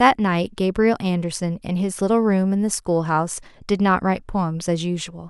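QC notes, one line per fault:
No faults heard anywhere in this speech recording.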